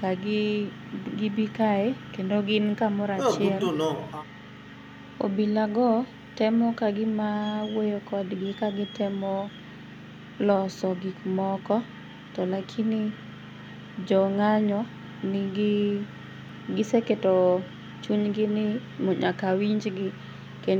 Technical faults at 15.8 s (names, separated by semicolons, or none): none